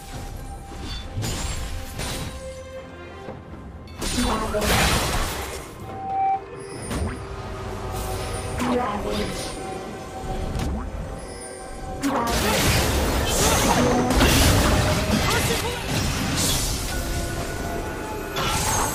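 At 3.27 s the audio makes a skip ahead. The change runs to about 3.42 s. Roughly 0.4 s of sound never plays. That stretch was dropped, either on the way or by an overflowing jitter buffer, while later audio was already waiting. Playback simply jumps forward. There is only a brief gap of about 19 ms and no fill at the join. The two sides are butted together almost directly, so the sound lurches and the delay shrinks by a similar amount.

At 5.83 s a loudspeaker feedback squeal begins. The microphone is picking up the loudspeaker it feeds. At 772 Hz the loop gain rises above one, so that tone keeps feeding itself. It swells over a little under half a second into a steady whistle. At its peak it sits about 5 dB above the rest of the sound. The squeal stops at 6.48 s.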